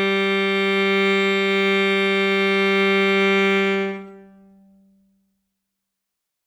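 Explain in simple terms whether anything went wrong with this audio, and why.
Nothing went wrong with the technical side of this music recording; it holds together steadily from the first moment to the last without any interruption or damage to the signal.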